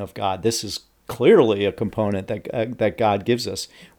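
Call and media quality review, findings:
No faults found in the speech audio for this call and media quality review.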